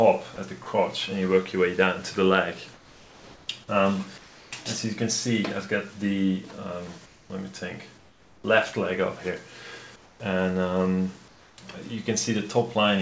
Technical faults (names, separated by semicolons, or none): sound dropped by the voice detector; comfort noise in place of the background